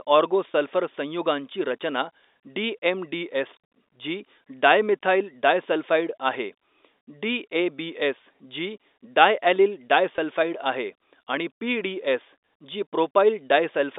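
Packet loss with pitch repetition occurs at 0.52 s and again at 10.16 s, each gap lasting about 20 ms, which fits a single lost packet. Both times the receiver bridged the hole by repeating the last pitch period of the speech, so each event sounds like a brief held, slightly buzzy tone rather than a dropout. The gaps are too short for the repetition to fade into silence, and the telephone-band G.711 sound carries straight through them.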